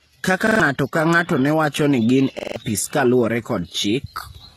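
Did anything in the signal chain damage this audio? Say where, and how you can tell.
Yes. At the codec stage, the whole clip shows heavy compression damage. The treble above the midrange sounds synthetic, with s sounds gritty and lispy, and the spectrum stops dead at 12.4 kHz. On a spectrogram, the upper bands look like smeared copies of lower ones, with harmonics that don't line up across the crossover and a flat ceiling at 12.4 kHz. This is likely HE-AAC compression at a low bitrate, which rebuilds the treble by spectral band replication rather than coding it.

At the driver or buffer stage, there are two repeated-buffer stutters, from 0.47 to 0.60 s and from 2.39 to 2.56 s. In each, a piece about 43 ms long plays several extra times back to back with a hard join at each repeat, heard as a short stutter. The waveform shows identical blocks with discontinuities at their edges, and the spectrogram shows matching vertical stripes. 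The repeat length fits a 2048-sample buffer, and each stutter costs roughly 150 ms of sound.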